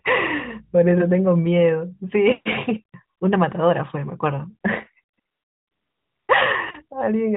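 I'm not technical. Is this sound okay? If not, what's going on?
No. There is AMR comfort noise at 3.18 s, briefly at 5.14 to 5.18 s, and then for about a second from 5.2 to 6.28 s. The phone decided nobody was talking and stopped sending the real sound, so the receiving end filled the gap with made-up, smooth hiss. You hear the true background switch to an even, artificial noise and back. The call's narrowband phone quality, with nothing above 4 kHz, is normal for this kind of mobile call.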